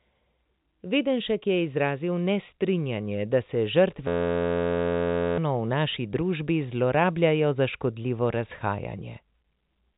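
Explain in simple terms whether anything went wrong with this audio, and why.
Right after "da se", from 4.08 to 5.38 s, the speech turns into a steady 86 Hz buzz. This is a system hang loop: the computer froze and replayed one 11.6 ms scrap.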